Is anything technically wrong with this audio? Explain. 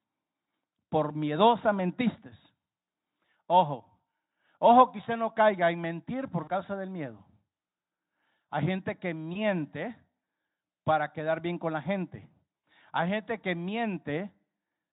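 Yes. At 6.43 to 6.51 s, 9.33 to 9.39 s and 12.62 s the speech briefly smears into a buzzy tone or coloured noise that fades, and stays weak just after. This is VoIP packet loss concealed by the speech codec, with gaps of about 40, 20 and 60 ms. The decoder fills each gap by extending its last pitch and spectral shape at falling gain, and it needs a moment to recover once packets resume. The Speex coding around these dropouts shows at most faint damage.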